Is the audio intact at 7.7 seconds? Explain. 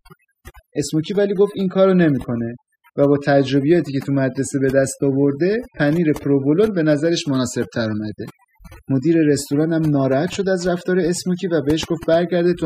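No, overdone noise removal runs through the whole clip, so 7.7 s is affected: bands near the noise estimate are gated away, leaving twinkling near-silence, unlike codec smearing.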